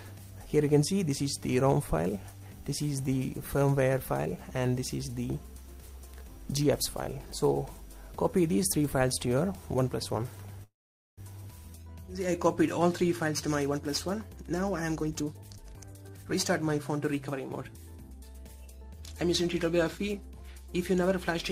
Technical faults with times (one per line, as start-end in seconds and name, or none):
10.63-11.21 call audio freeze
14.94-16.69 jitter buffer speed-up